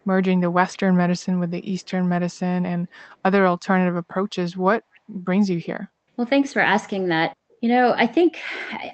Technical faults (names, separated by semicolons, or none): echo leak